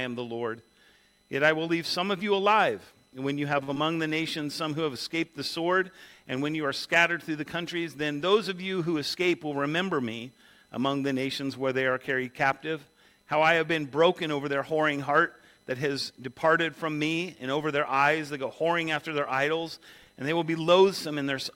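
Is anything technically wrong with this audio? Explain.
Yes, there are three network playback faults.

At 3.63 to 3.70 s there is a short stall from a late packet. The jitter buffer ran dry, so the last sound was held for 44 ms before continuing.

At 3.74 to 3.78 s there is a short concealed packet loss. About 20 ms never arrived and was filled by extending the preceding sound, leaving a brief smear.

From 9.15 to 9.55 s there is a jitter buffer speed-up. Short pitch-period pieces were cut, totalling about a twentieth of a second. The audio plays at 109% speed with unchanged pitch and sounds hurried.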